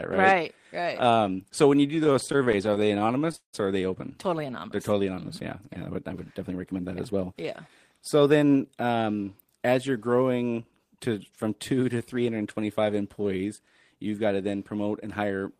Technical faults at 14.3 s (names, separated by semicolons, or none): jitter buffer speed-up